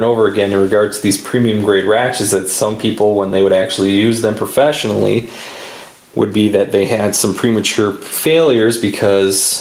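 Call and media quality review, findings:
Gain pumping throughout: gain swings around 10 dB under loud sounds. Waveform flattened. Likely excessive input gain driving fast limiter.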